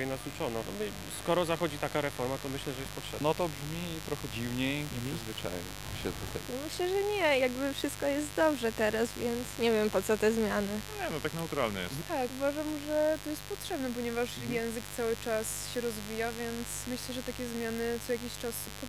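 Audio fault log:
throughout, mains buzz: a steady, raspy buzz sits under the whole recording, quite loud against the wanted sound, roughly 10 dB down. It's built on 50 Hz, with sharp spikes twice per cycle from something like a dimmer or rectifier, so harmonics reach up into the kHz range.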